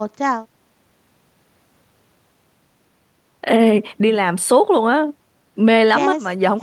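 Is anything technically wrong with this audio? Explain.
No, nothing technical stands out here; the speech just comes through steadily with nothing getting in its way.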